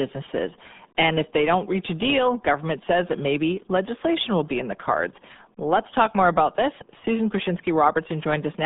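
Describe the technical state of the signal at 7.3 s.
At 7.3 s the speech is carrying RealAudio 14.4 codec damage, present throughout the clip rather than confined to this moment. The codec squeezes speech into a very low data rate, which fits an 8 kbit/s stream, by modelling the signal coarsely and discarding the rest. The band runs only from about 150 Hz to 3.7 kHz, with nothing above 3.8 kHz, and the heavy coding leaves the speech muffled and gargly.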